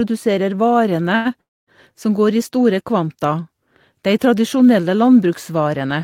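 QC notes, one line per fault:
1.15–1.27 s, short stall from a late packet: a packet arrived late and the jitter buffer emptied, so the last sound is held about 0.1 s, then resumes with nothing lost.
1.41–1.69 s, call audio freeze: likely packets held up in transit draining the jitter buffer; sound decays into about 0.25 s of silence, then resumes where it stopped, adding a gap.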